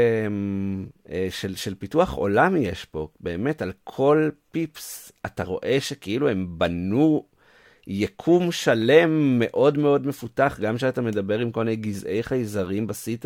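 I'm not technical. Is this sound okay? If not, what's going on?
Yes, this sound is okay. There is nothing technically wrong to point out anywhere in it.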